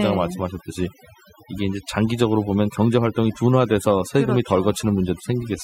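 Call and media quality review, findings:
Mains hum throughout: steady 60 Hz tone sitting roughly 30 dB under the speech, with low harmonics. Ground loop or nearby transformer coupling the power line into the path. Fixed pitch and constant level separate it from rumble or handling noise.

Overdone noise removal throughout: noise floor pulled down and breaking up into twinkling specks. Denoiser set too hard, cutting individual frequency bands near its noise estimate along with quiet speech detail. Unlike codec artefacts, it leaves an unnaturally empty background between phrases.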